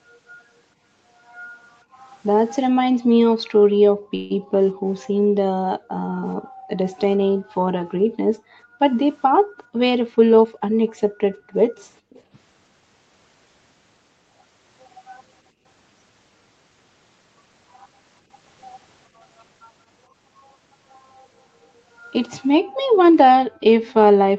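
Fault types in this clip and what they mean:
Background gated by the echo canceller: While the far end's audio was playing out of the loudspeaker, the echo canceller pulled the microphone down hard, and the room sound under the speech sank by as much as about 40 dB before coming back. This happens four times: 1.85 to 4.52 s, 5.79 to 11.53 s, a brief shallower dip of about 15 dB at 15.52 to 15.64 s, and 22.64 s through the end.
Call audio freeze: At 4.15 to 4.32 s the audio stalls for about 149 ms, most likely because packets were held up in transit and the jitter buffer ran dry. The receiver covered the gap by stretching the last sound, and when the packets arrived the speech carried on from where it had stopped. Nothing is lost, but the rest of the call now runs about 149 ms later.
Jitter buffer speed-up: From 9.54 to 10.70 s the speech plays at about 111% speed with no change in pitch. 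The buffer had built up more delay than it aims for, so the receiver removed short pieces one or a few pitch periods long, many times in a row, cutting roughly 150 ms in total. The delivery over that stretch sounds hurried.
Echo leak: At 10.87 to 12.21 s and again at 22.70 to 23.93 s, a faint delayed copy of speech sits about 30 dB below the main speech and trails it by 453 ms. The likely cause is a speakerphone on the other side whose echo canceller did not remove everything its microphone picked up, so part of the playback was sent back down the line.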